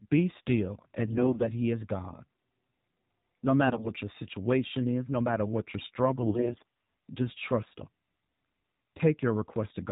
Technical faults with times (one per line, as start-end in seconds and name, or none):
0.00-9.91 AMR narrowband mobile codec
1.06-1.44 AMR bit errors
3.66-3.92 AMR bit errors
6.22-6.65 AMR bit errors